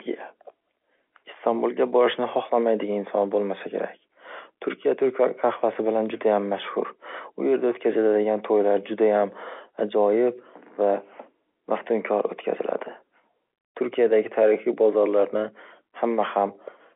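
No technical faults are present in this speech recording, which carries the narrow band of an ordinary telephone line, roughly 300 Hz to 3.4 kHz with nothing above about 3.7 kHz, consistent with standard G.711 mu-law telephone coding at 64 kbps.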